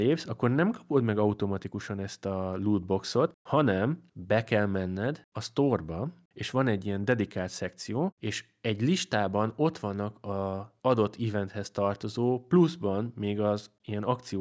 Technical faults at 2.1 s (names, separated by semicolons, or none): none